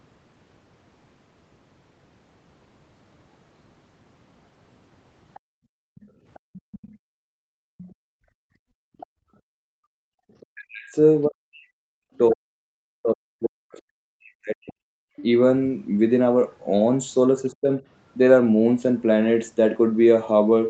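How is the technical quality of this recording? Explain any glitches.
Several echo-canceller faults mar this speech recording. They sit over a call path whose band ends at 8 kHz, so a spectrogram shows nothing above that line throughout.

Other side's voice leaking through occurs from 5.34 to 10.46 s at about 25 dB below the speech, then briefly at 12.16 to 12.35 s and 15.16 to 15.21 s at about 20 dB below. It is likely loudspeaker playback that the echo canceller failed to remove. It sounds like a faint second talker. On a spectrogram it shows as weak, separate harmonic traces under the main voice.

Background gated by the echo canceller runs from 5.4 to 10.24 s, drops as deep as about 40 dB and covers roughly 4 s in total. A short repeat occurs at 15.05 to 15.16 s, about 100 ms. The canceller clamps the microphone while the loudspeaker plays, so the room tone vanishes abruptly. The waveform's noise floor flattens, and the spectrogram goes dark between events.

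Speech suppressed in double talk spans 10.52 to 14.77 s, with drops of roughly 40 dB affecting around 3 s. A milder dip of roughly 15 dB occurs at 17.5 to 17.81 s. The likely cause is overlapping talk that the canceller misread as echo. The voice dips and chops out in pieces. The waveform shows notched, hollowed envelopes, and the spectrogram shows missing slices and thinned upper harmonics.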